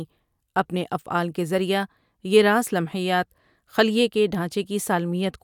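No technical faults occur at any point in the speech, so there is nothing to describe in time order.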